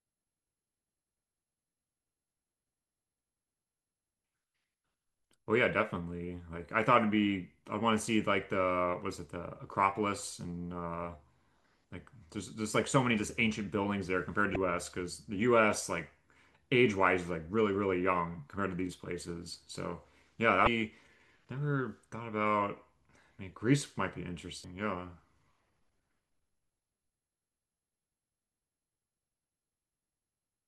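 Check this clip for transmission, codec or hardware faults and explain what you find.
The speech carries three short bursts of damaged data in a compressed stream, at 14.53–14.56 s, 20.64–20.67 s and 24.61–24.64 s. Corrupted bytes make the decoder misread those frames and lose sync until it finds a valid header. Each is heard as a brief chirp, squawk, click or short hole and appears as a thin vertical stripe or gap on a spectrogram, with an abrupt discontinuity in the waveform.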